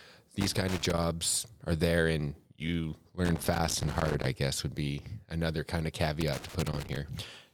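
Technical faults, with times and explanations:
0.41–1.04 s, 3.25–4.26 s and 6.21–6.96 s: loose connector crackle. Three irregular bursts of scratchy crackle break into the speech, the second between "are there and you" and "guess would be another", the third right after "be another kind of". A worn or dirty contact in the signal path is making and breaking contact as it shifts. That chops the signal on and off in rapid, uneven steps, so the bursts come out ragged.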